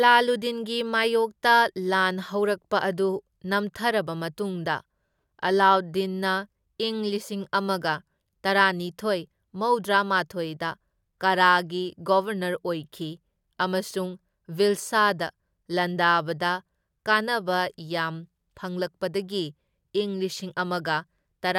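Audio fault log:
Nothing to log here; this speech clip runs along without a single fault worth a line.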